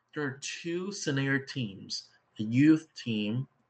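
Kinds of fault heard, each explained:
Microphone volume stepped up: Software judging the microphone too quiet raises its input volume in one jump, so voice and background get louder together. Here it steps three times: at 1.02 s, just after "are two", then 2.04 s and 3.06 s, by about 7, 4 and 2 dB.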